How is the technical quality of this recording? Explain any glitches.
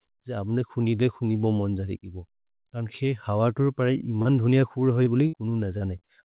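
The recording has audible dropouts from lost packets, clustered in the last two seconds. The band stops at about 4 kHz, which fits a narrowband telephone codec such as G.711 mu-law at 64 kbps.

Short concealed packet loss occurs at 4.22–4.28 s, just after "खेत् हव तु परि", then at 5.03–5.09 s, 5.78–5.84 s and 5.99–6.04 s. Each time about 30 ms of audio failed to arrive. The receiver extended the preceding sound over the hole and blended back in, which is heard as a brief smear or wobble.

A burst of packet loss runs from 5.27 to 5.36 s, with about 60 ms missing. The decoder kept synthesising the last sound while lowering its level, producing a short held buzz or fading hiss. The audio then resumes past the lost segment, so that stretch of sound is simply absent.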